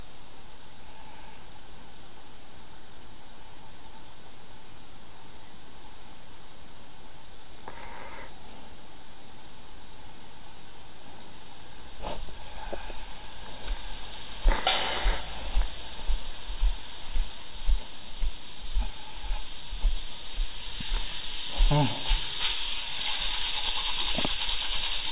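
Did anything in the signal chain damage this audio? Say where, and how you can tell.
No, no signal-chain damage audible.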